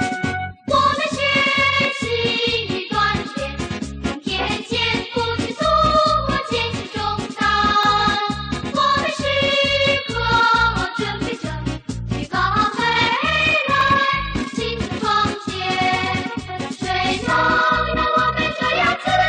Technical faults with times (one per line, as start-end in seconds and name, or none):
1.85 overlap between stream segments
7.83 overlap between stream segments
13.81 overlap between stream segments